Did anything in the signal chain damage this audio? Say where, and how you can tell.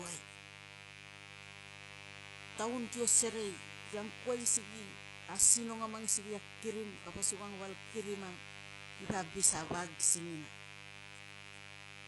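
Yes. In the analogue wiring, a raspy mains buzz built on 50 Hz runs the whole clip, only about 15 dB below the speech. Switching spikes are feeding harmonics high up the spectrum.

At the codec stage, the top end sounds synthetic and gritty, with nothing above 11.5 kHz. The likely cause is HE-AAC compression at a very low bitrate, around 12 kbps, rebuilding treble from copied lower bands.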